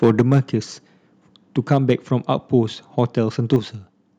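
Speech with microphone overload in three places, from 0.03 to 0.38 s, 1.71 to 1.92 s and 3.53 to 3.56 s, where the loudest syllables take on a harsh, crackly edge. The likely cause is input volume set so high that peaks drove the converter about 6, 5 and 2 dB past its limit. The peak tops are flattened, affecting around 5 percent, 2 percent and a tenth of the samples. On a waveform the peaks show as flat plateaus, and a spectrogram shows broadband smearing at those moments. During the first overload and right after the last, at 0.21 s and 3.56 s, the microphone volume is stepped down. Voice and background both drop abruptly by about 4 dB, most likely because the call software reacted to the clipping by lowering the device's input volume in a single step. The waveform envelope shows a sudden narrowing at each point, and the spectrogram dims uniformly across all frequencies rather than fading gradually.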